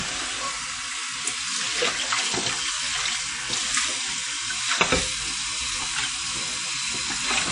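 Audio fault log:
Throughout, low-bitrate audio saved at a high bitrate: nothing is present above 10.1 kHz, and the sounds carry the dull top end and artefacts of heavy lossy coding, even though the file is a high-rate MP3. The likely cause is an earlier low-bitrate encode, something like a 32 kbit/s WMA, later re-saved at around 300 kbit/s. The second pass keeps the damage intact and cannot restore the discarded detail.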